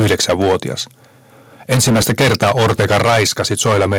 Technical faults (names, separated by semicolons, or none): microphone overload; microphone volume stepped down